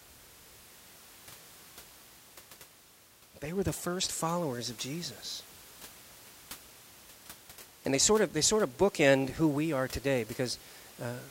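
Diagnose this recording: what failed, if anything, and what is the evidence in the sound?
Nothing failed; only room noise sits beneath the speech.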